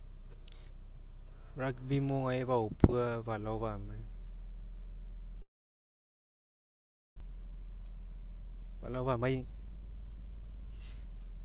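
From 5.42 s to 7.22 s the speech cuts out in what is likely a long network dropout: the last sound carries on briefly as a fading buzz, then near silence holds for most of the gap, and roughly a second of speech never returns.

From 7.31 s to 11.38 s a jitter buffer speed-up drains the backlog of around 0.7 s left by the gap. Short pitch-period slices are removed repeatedly, so speech runs at 115% speed with unchanged pitch and sounds hurried, within the call path's 4 kHz G.711 bandwidth.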